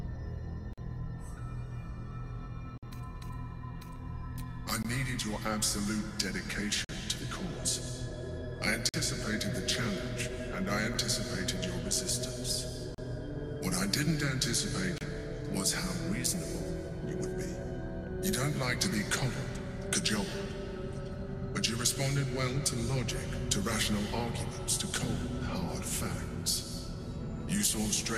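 Starting at 0.73 s, a gap between stream segments cuts hard-edged holes of silence into the sound, roughly every 2 seconds: 0.73 to 0.78, 2.78 to 2.83, 4.83, 6.85 to 6.89, 8.89 to 8.94, 10.94, 12.95 to 12.98 and 14.98 to 15.01 s. They run from about 7 to 50 ms. The 2-second spacing points to segment time stamps that don't quite meet, leaving the player to pad each join with silence, though nothing is actually dropped.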